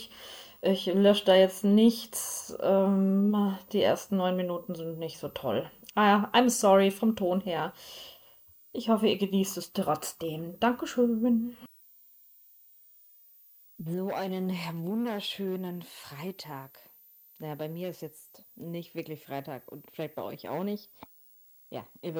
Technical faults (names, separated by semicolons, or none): switching supply whistle